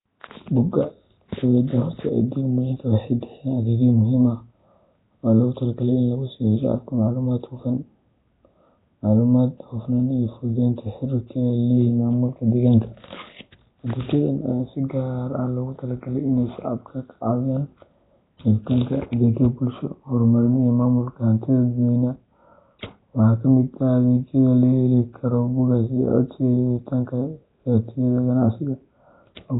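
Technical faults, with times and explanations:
Throughout: Nellymoser compression. The speech carries a rough, hissy halo and a smeared, underwater quality, and nothing is heard above about 3.8 kHz, so sibilants and consonant detail are dulled. The damage is heavy, with quieter spectral bands replaced by shapeless noise rather than real detail. This is likely Nellymoser Asao, the old Flash microphone codec. Its fixed, low bit allocation per block cannot cover every band, and the coarseness here fits a rate near 16 kbps.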